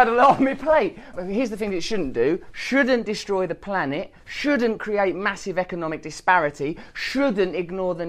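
Nothing in the audio points to a technical fault in how the signal was captured, carried or reproduced.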